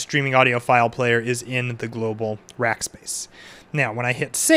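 No audible technical faults occur anywhere in this audio.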